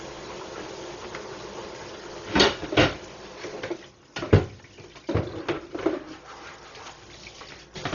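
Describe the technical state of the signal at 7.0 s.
At 7.0 s the sound is still carrying the heavy damage present across the whole clip, most likely from Dolby Digital compression at a very low bitrate, around 32 kbps. Starved of bits, the encoder cuts the band so nothing remains above 6.9 kHz, and leaves many frequency lines without mantissa data, which the decoder fills with dither noise. The result is dull and muffled, with a rough, fluttering grain clinging to tonal parts.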